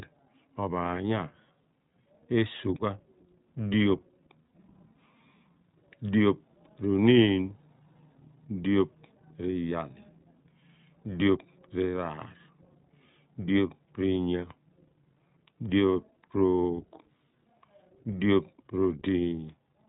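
From start to finish the speech sounds boxed-in and slightly rough, with a synthetic edge and no air or sibilant sparkle above 4 kHz. That is the iLBC codec at work: a narrowband VoIP coder that throws away everything above 4 kHz and rebuilds each short frame's excitation on its own, here in 20 ms frames at a rate that fits about 15.2 kbps, leaving plainly audible coding damage.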